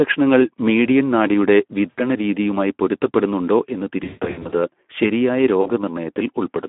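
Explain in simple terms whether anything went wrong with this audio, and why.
Throughout, the speech sounds hoarse and grainy, and it is squeezed into a narrow telephone-like range of roughly 200 to 3400 Hz. This is the Speex codec, an older internet-calling compressor that runs short of detail at this low quality setting.

Three times, the speech smears out and fades. At 1.89 to 2.00 s, just after "മീഡിയൻ നാഡിയുടെ", about 80 ms of audio is missing. At 4.03 to 4.55 s, just after "രീതിയുമായി പൊരുത്തപ്പെടുന്നുണ്ടോ എന്ന്", gaps totalling about 320 ms are scattered over roughly half a second, the longest being 140 ms. At 5.61 to 5.71 s, about 40 ms is missing. This is VoIP packet loss concealed by the speech codec: chunks of audio never arrived, so the decoder stretched out the last sound it had while letting it fade.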